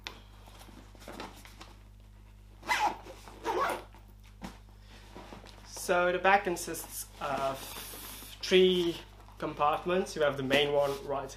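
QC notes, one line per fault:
Nothing to flag here; I listened the whole way and didn't catch a single problem worth noting.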